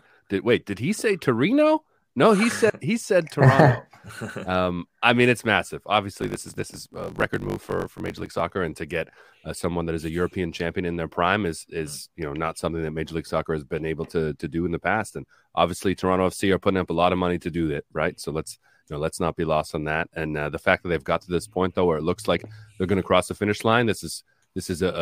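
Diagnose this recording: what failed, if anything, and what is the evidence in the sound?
A block size mismatch (truncated) at the driver or buffer stage: one stage wrote longer blocks than the next read, discarding each block's tail. From 6.2 to 8.41 s the speech runs about 1.16 times fast at near-normal pitch, under a 50 Hz buzz, which fits 1024-sample written blocks.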